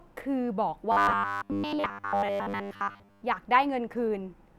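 From 0.92 s to 3.22 s the speech takes on a robotic sound from repeated short buffers. The voice turns into a rigid, metallic buzz pitched at 100 Hz. It still tracks the rough shape of the words. The likely cause is audio arriving too late for playback. To cover the gaps, a short slice of about 10 ms seems to be played again and again. That loop sets the fixed buzz. Most of the real audio in this stretch is skipped.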